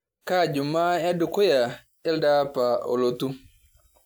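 No audible technical faults in this recording.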